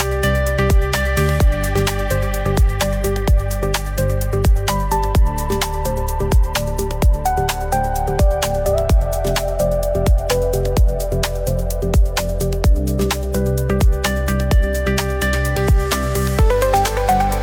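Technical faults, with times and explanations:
No technical faults can be heard anywhere in the signal.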